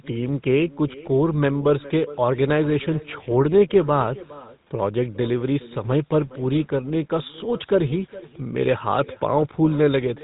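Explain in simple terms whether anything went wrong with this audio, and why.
Two problems run through the whole recording. The first is echo with no canceller: the far end played the call through a loudspeaker, its microphone picked it up again, and nothing removed it. So each phrase returns a little under half a second later as a faint, thin copy.

The second is the GSM full-rate codec, an early mobile-phone compression method. It rebuilds the voice from a simple model of the throat driven by evenly spaced pulses, and it drops everything above 3.8 kHz. The result is plainly audible: dull, buzzy, gravelly speech.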